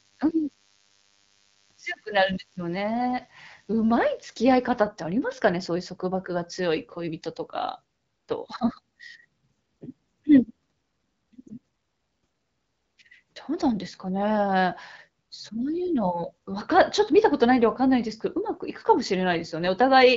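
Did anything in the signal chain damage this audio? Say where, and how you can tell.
Yes. From 0.0 to 4.8 s a thin 100 Hz DECT cordless phone buzz, roughly 40 dB below the speech, enters the analogue wiring. Its rasping harmonics distinguish it from smooth mains hum.

At 11.48 to 11.53 s one lost AMR speech frame (20 ms) shows as a brief warble in the network stage. The AMR-WB decoder's concealment smooths the sound rather than leaving a hard gap or click.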